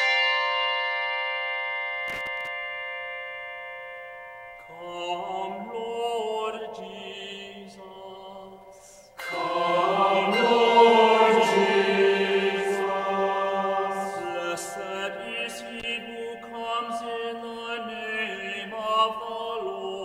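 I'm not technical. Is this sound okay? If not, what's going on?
No. There are two bursts of loose connector crackle, from 2.07 to 2.47 s and from 15.80 to 15.91 s. A worn or dirty plug contact briefly loses touch when moved, chopping the sound into scratchy crackles.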